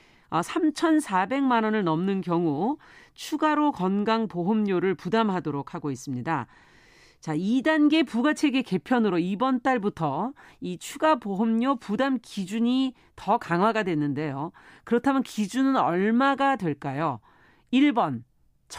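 No technical faults can be heard anywhere in the speech recording.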